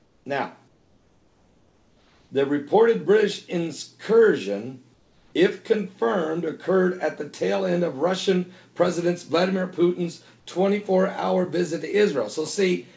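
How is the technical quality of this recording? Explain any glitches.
The recording has background swaps in three places, and the audio stops at 8 kHz, which fits the G.722 call codec.

Comfort noise in place of the background appears from 0.00 to 0.26 s, 0.68 to 2.30 s and 4.94 to 5.33 s. The likely cause is a sender that paused transmission and a receiver that filled in synthetic noise. In each gap the background becomes smoother and about 4 to 5 dB quieter. On a spectrogram these stretches show as flat, even noise, and on a waveform as a slightly lower floor.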